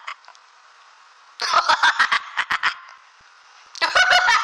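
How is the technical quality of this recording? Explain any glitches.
The recording has one clear fault. From 2.52 to 3.89 s there are CD scratch ticks. Seven ticks come at a steady rate of about five per second. A scratch wipes out more data than error correction can rebuild, once per disc turn. The player patches or mutes those samples. Each tick is a dropout of a few milliseconds at most.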